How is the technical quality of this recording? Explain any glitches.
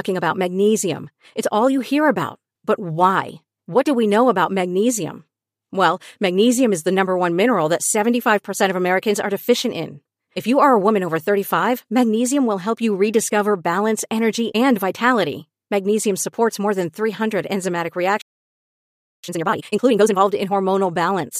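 The recording has two linked glitches near the end, where the speech cuts out and then rushes to catch up.

From 18.21 s to 19.24 s there is a playback stall: the speech stops mid-flow and the output goes completely silent for about 1.02 s. The likely cause is the player running out of buffered data or its audio thread being held up, so nothing reached the output until it recovered. On a waveform this is a flat line, and on a spectrogram a clean, fully dark vertical band with abrupt edges.

From 19.24 s to 20.24 s comes a time-compressed catch-up. To clear the backlog left by the stall, the player drops small pieces of audio and cross-fades the remaining pieces together, running at 2.0 times normal speed while keeping the original pitch. The speech sounds hurried. A spectrogram shows the harmonic bands at their usual heights but with syllables squeezed closer together in time. The waveform is denser, with shortened gaps.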